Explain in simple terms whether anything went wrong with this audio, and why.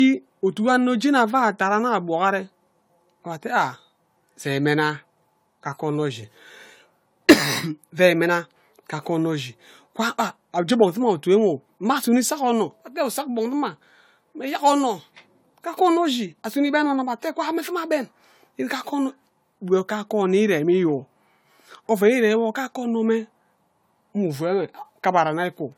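Generation loss runs through the whole speech clip, start to end: the sound is swirly, hollow and smeared, with blurred consonant onsets. That wear is worse than one lossy save would cause, likely from being re-encoded about four times over.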